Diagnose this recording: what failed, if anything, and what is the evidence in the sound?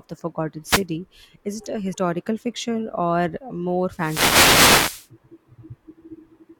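The radio link failed, twice, with a wireless microphone noise hit. A swish of static is heard from 0.65 to 0.84 s. A longer one runs from 3.95 to 5.08 s. The analogue FM signal faded as reflections cancelled, and receiver noise rose.

The codec stage shows a brief disturbance from 1.92 to 1.95 s. The audio jumps ahead there. The disturbance lasts about 32 ms, against an MP3 frame length of 26.1 ms. The likely cause is a broken MP3 bit reservoir. After a cut, the next frame borrowed bytes from the wrong frame.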